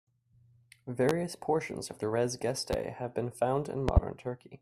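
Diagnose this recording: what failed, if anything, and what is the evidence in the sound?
Loud pops at 1.09 s, 2.73 s and a double pop at 3.89 to 4.00 s tower over the speech, which continues underneath, unlike a dropout. Likely analogue-wiring voltage transients.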